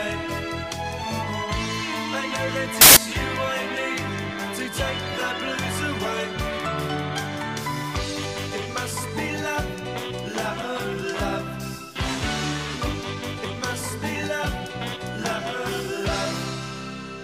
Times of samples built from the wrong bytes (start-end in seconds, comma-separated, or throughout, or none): 2.81-2.97